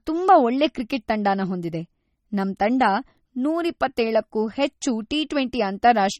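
Right from the start and all the way through, the speech has a watery, swirly quality with smeared edges, likely MP3 compression at a low bitrate, something like 32 kbps. Starved of bits, the encoder drops weak frequency lines frame to frame, and nothing survives above 18.7 kHz.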